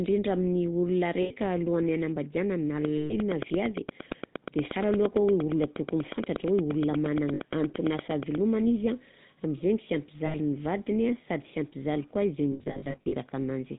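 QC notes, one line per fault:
Throughout: GSM full-rate codec. The 13 kbps pulse-excited coding leaves the speech buzzy and gravelly. The spectrogram shows a hard ceiling at 4 kHz with nothing above it.
1.22–1.32 s, 2.96–3.14 s, 7.34–7.40 s, 10.26–10.36 s: lost GSM frames. Gaps of 60–140 ms are filled by repeating the last good frame, giving a metallic ring. The spectrogram shows smeared, frozen bands.
12.52–13.14 s: lost GSM frames, scattered over 600 ms, with the longest run about 70 ms. The repeated frames give brief rough rings that show as patchy frozen stripes.
2.85–8.36 s: train of clicks. About 50 same-shaped clicks come at a regular 8.5 per second, peaking about 15 dB above the speech and ticking through pauses too. They are likely from interference by nearby equipment or a faulty connection or power supply, and appear as evenly spaced vertical spikes on the waveform and full-band lines on the spectrogram.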